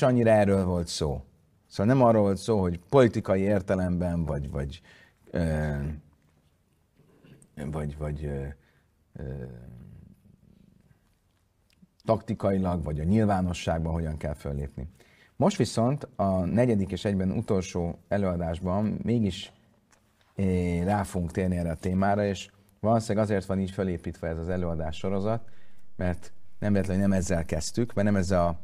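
At about 24.52 s the speech picks up a DC step: the waveform's zero line suddenly jumps to an offset of about -35 dBFS and stays there right through to the end of the clip. You hear it as a single low thump or click at that moment, the kind of thing a converter recalibrating or an offset input being switched in would cause. The speech rides on top unchanged; it's just sitting on a shifted baseline from there on.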